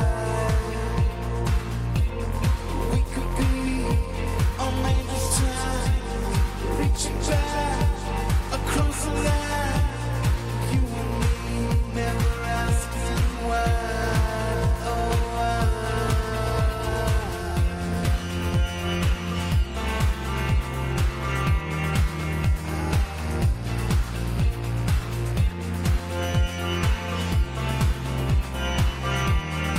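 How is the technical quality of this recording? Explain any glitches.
Nothing in the recording stood out as a technical problem on listening, so there are no glitches to explain.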